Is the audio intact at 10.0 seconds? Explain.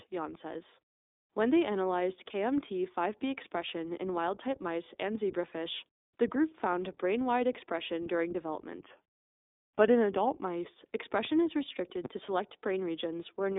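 No. From 8.80 to 10.45 s, just after "brain wide expression during", a drift correction step is the likely cause of playback slowing 5.2% and pitch dropping about 93 cents before snapping back. On a spectrogram the harmonics sit visibly lower, then jump up at 10.45 s. Throughout, the iLBC codec's 20 ms frame coding leaves the sound rough and synthetic. The spectrogram is empty above 3.8 kHz.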